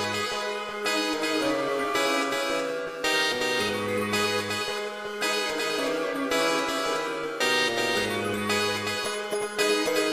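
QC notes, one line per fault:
Throughout, doubled audio track: a dry, full-band copy trails about 0.4 s behind, roughly 5 dB quieter. Likely captured twice via a slower path.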